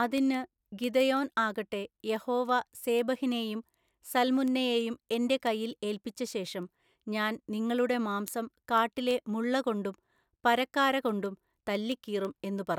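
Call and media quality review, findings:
Word clock ticks, 0.18 to 12.75 s throughout the speech. Sharp ticks at a steady rate of roughly one every 0.15 s, around 70 in total, uneven in strength. Probable component: a digital interface receiver running on its own clock, not locked to the sender. The clocks differ by something like 150 ppm. At each slip, one sample is dropped or repeated and neighbouring samples are misread, producing a single-sample discontinuity.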